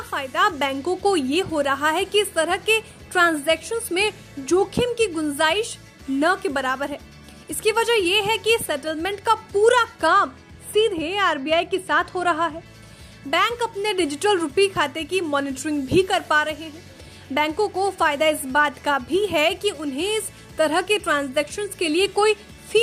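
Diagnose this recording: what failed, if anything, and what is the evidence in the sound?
A de-emphasis filter was applied wrongly in the processing chain, cutting treble either from audio that carried no matching pre-emphasis or a second time. From 10.07 s to 12.66 s the high end slopes away smoothly, sitting about 10 dB down at 10 kHz relative to 1 kHz, so the sound turns dull and muffled for that stretch. Because the filter is not undoing a matching boost, the cut stays uncorrected while it is active and the treble returns when the section ends, which points to a filtering stage switching in briefly rather than a transmission or codec loss.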